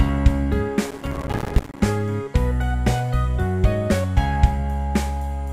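Processor overload crackle runs from 0.91 to 1.80 s: around a hundred missed deadlines leave short silent gaps, pointing to buffers of roughly 5 ms, seen as waveform dropouts and broadband vertical spectrogram streaks.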